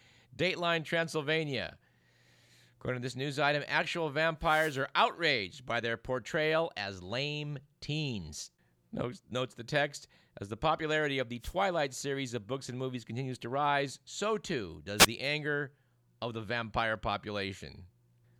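At 4.41 s a wireless microphone noise hit breaks into the speech and lasts until 4.83 s. Two shorter ones follow, at 11.40 to 11.54 s and at 14.98 to 15.07 s. Each is a brief swish or burst of static. The analogue FM radio link fades as reflected signals cancel the direct one. The receiver's own noise then rises through the speech until the signal recovers.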